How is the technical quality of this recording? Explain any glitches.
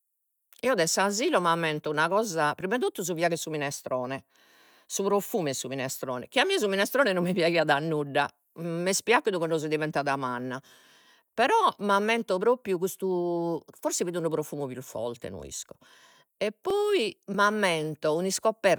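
The recording has one recurring glitch, overlapping chunks, heard at 4.65–4.68 s (between "fiagu 'e su minestrone" and "si profumu 'e su"), 10.68–10.70 s (just after "cando so diventada manna") and 16.70–16.73 s. The audio was handled in 6.0-second blocks, and each block begins about 25 ms before the previous one ended, so that slice of speech plays twice at every join. The result is a brief stutter or click every six seconds.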